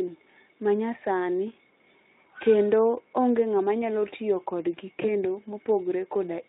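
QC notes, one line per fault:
5.01–5.06 s, VoIP packet loss concealed by the speech codec: one stretch of audio, which fits a single lost 20 ms frame, never arrived, so the Speex decoder extended its last pitch and filter at falling gain. The speech briefly smears into a buzzy tone or coloured noise and stays weak or distorted into the following frames.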